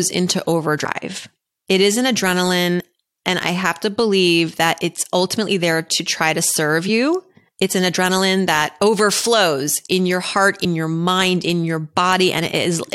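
At 0.84, 2.79, 6.88 and 10.64 s the speech jumps forward: compressed frames skipped, roughly three at the first and two at each later one, which fits 23.2 ms frames. That drops around 70 ms, then about 50 ms, with a short blip at each join.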